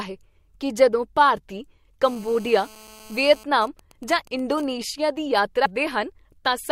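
After "ਹੈ ਕੀ ਜਦੋਂ ਭਾਰਤੀ", from 2.04 to 3.43 s, GSM phone buzz appears. A nearby 2G phone in a call pulses 217 times a second. The audio circuit rectifies it into a harsh, harmonic-rich buzz about 24 dB below the speech.

From 3.43 to 4.64 s, GSM signalling bursts follow. The caller has gone silent, so the phone transmits only in short groups. The result is even ticks with a longer 217 Hz buzz twice a second, roughly 25 dB down.

At 5.65 s, compressed frames are skipped. Roughly 300 ms of audio vanishes, which fits about fifteen 20 ms frames. The speech jumps ahead.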